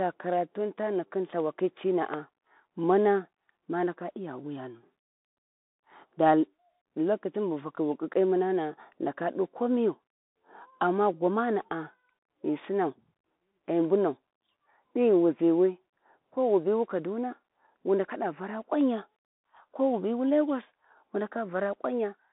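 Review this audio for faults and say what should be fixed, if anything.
Bluetooth CVSD headset codec throughout: the audio sits in a 200 Hz to 3.7 kHz band with nothing above 3.8 kHz, and one-bit delta steps leave granular hiss and scratchy sibilants, which fits a 64 kbps CVSD stream. Record through a wired or wideband microphone path instead of the headset's narrowband link.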